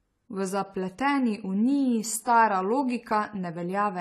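Speech with plainly audible AAC compression damage throughout, likely from a low-bitrate AAC-LC encode (the sound fits about 32 kbps): nothing above 14 kHz, dull smeared sibilants with a warbling fizz. That warble, not just missing top end, separates it from plain low-pass filtering.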